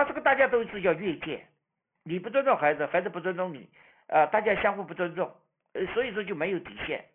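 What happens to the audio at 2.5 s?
At 2.5 s the speech sounds gritty and metallic, with sibilants smeared into false, unrelated tones, as it does throughout the clip. This is aliasing: content above about 3 kHz folded back down, unfiltered, roughly 15 dB below the speech, which fits a drop to a 6 kHz sample rate.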